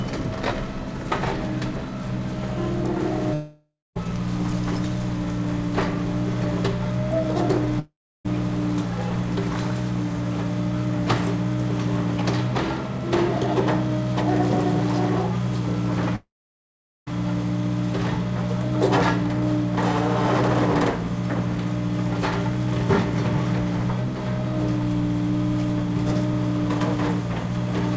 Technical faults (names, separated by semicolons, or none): long network dropout